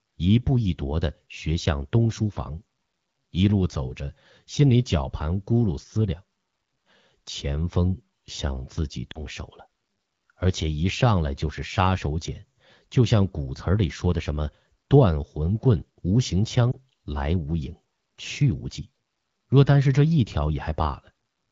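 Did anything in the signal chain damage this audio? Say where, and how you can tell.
Yes. Lost AMR speech frames on the radio link cause brief dips at 9.11 to 9.22 s and 16.72 to 16.76 s, where the decoder replayed earlier pitch and vocal tract settings at falling gain.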